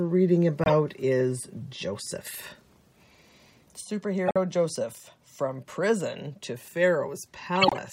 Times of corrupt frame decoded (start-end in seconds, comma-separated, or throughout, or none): 0.64-0.70, 4.26-4.37, 7.55-7.77